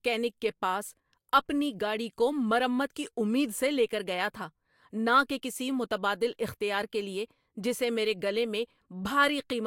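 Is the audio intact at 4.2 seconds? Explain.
Yes, the speech at 4.2 seconds is intact, with no dropout, click, distortion or other fault at that moment.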